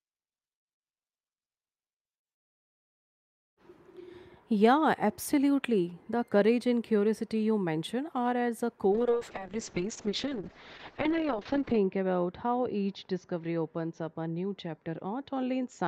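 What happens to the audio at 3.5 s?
Nothing goes wrong at 3.5 s; the speech plays through that moment intact, with no dropout, click or distortion.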